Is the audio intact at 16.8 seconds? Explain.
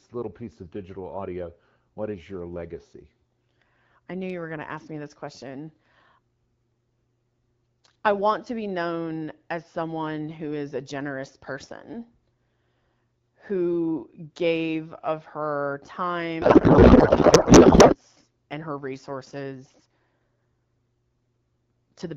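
No. At 16.8 s a codec payload misread runs from 16.41 to 17.96 s, ending just before "and her resources". The speech becomes garbled noise and warble that barely tracks it, which fits octet-aligned AMR frames being unpacked as bandwidth-efficient, scrambling every field.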